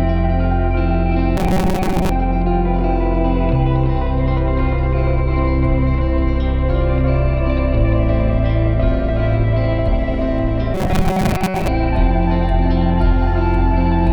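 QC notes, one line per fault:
1.37–2.10 s: robotic sound from repeated short buffers. A hard metallic buzz sits at 188 Hz. It is likely caused by audio arriving too slowly, so a tiny slice of about 5.3 ms is looped. About half of this stretch is repeats.
10.74–11.68 s: robotic sound from repeated short buffers again. The same rigid 188 Hz buzz returns. The likely cause is the same looping of a slice about 5.3 ms long. Most of this stretch is repeats.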